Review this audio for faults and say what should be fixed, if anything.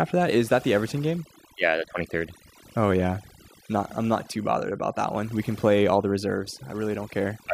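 Overdone noise removal affects the whole clip, from start to finish. The noise reducer was set so aggressively that frequency bands near its noise estimate are pulled far down or shut off, and quieter parts of the speech go with them. The background drops and breaks up into twinkling, warbling specks. Unlike low-bitrate codec artefacts, the gaps between phrases hold scattered specks rather than smeared or swirling sound. Running noise reduction at a gentler setting, and removing less than the full noise estimate, would prevent this.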